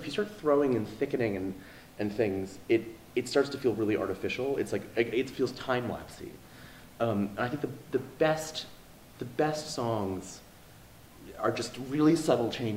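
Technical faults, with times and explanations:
Nothing stood out on a careful listen to the recording.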